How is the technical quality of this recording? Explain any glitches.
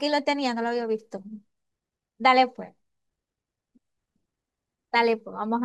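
No technical faults can be heard in the recording; the signal holds steady throughout, with no glitches to explain.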